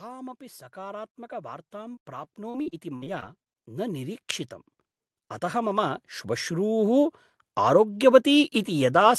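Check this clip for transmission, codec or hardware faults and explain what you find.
Two faults are present, overlapping in the first half of the speech.

From 0.73 s to 4.35 s there is automatic gain rising. The gain control judged the input too quiet and raised its gain gradually, by about 12 dB over more than three seconds. Because it scales the whole signal, the voice and the background noise swell together. This is heard as a slow, steady increase in loudness rather than a step, with the noise floor climbing along with the speech.

From 1.95 s to 3.48 s there is repeated packet loss (robotic sound). Roughly ten short holes occur in that span, the longest about 60 ms, adding up to about 340 ms of missing audio. The receiver covered about 320 ms of that by extending the last decoded sound, so around a fifth of the stretch is concealment. Since the holes come in quick succession, the speech turns choppy, with brief pieces dropping out.

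The call path underneath these faults sounds consistent with Opus at around 32 kbps, with the top end rolling off near 12 kHz.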